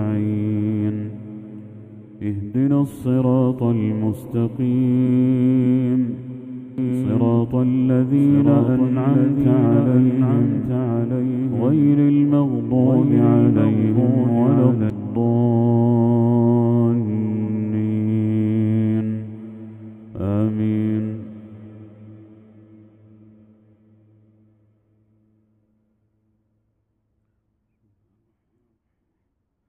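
A doubled audio track runs from 6.78 s to 14.9 s. A second, full-bandwidth copy of the sound trails the original by about one and a half seconds, roughly 5 dB quieter. This is likely a second capture through a slower path or an edit that left two out-of-step copies stacked. The copy has no decay or room colouring, so it reads as a distinct repeat rather than an echo, and it cuts in and out abruptly at both ends.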